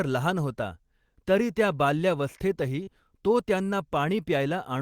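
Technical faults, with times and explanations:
2.83–2.90 s short concealed packet loss: a brief smeared wobble, as 40 ms of audio went missing and the decoder stretched the preceding sound across the gap.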